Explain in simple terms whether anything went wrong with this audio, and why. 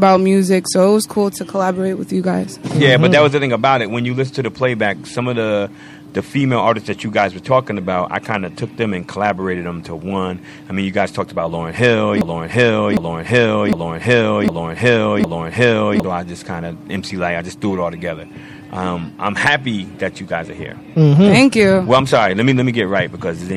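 Something did go wrong, at about 12.21 s. A short chunk of sound, roughly 0.76 s long, starts playing over and over, back to back, five times in a row until about 16.04 s. That's a broken-record loop. Most likely the player or stream stalled and kept resending the last piece it had in hand. Whatever should have played during those four seconds is simply gone.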